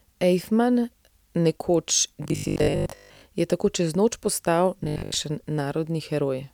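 From 2.24 to 3.22 s, just before "je tako čez noč", and again from 4.80 to 5.16 s, after "tako čez noč postal", the speech becomes a rigid 50 Hz metallic buzz: robotic sound from repeated short buffers, likely a 20 ms block looped while most of the real audio was skipped. The waveform shows roughly repeating 20 ms cycles, and the spectrogram shows evenly spaced 50 Hz harmonic stripes.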